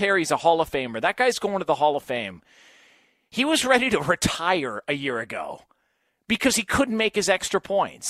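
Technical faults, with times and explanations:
No technical faults can be heard in the speech. Nothing in the audio calls for a time or an explanation.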